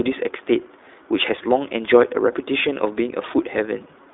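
iLBC codec damage runs throughout. Each frame is coded independently and nothing above 3.8 kHz survives, so the speech sounds narrowband, plainly rough and synthetic, consistent with its 15.2 kbps, 20 ms mode.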